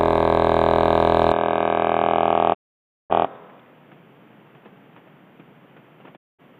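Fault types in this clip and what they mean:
Input switched to a poorer device: From 1.32 s to the end, the music suddenly loses everything above about 3.8 kHz and turns dull and boxy. It also drops a few decibels in level, and a new background noise sits well below it. There is no gap at the change. The likely cause is that the system moved its input to another microphone or a headset's call profile, which passes a narrower band and carries its own noise.
Digital broadcast dropout: The receiver stopped getting usable data and muted until good frames returned. Here the music fades out over about 20 ms and goes silent from 2.53 s to 3.12 s, a hole of about 0.55 s. It happens again from 6.15 s to 6.41 s, for about 0.22 s. Each time the music comes back further along, and whatever played during the silence is lost.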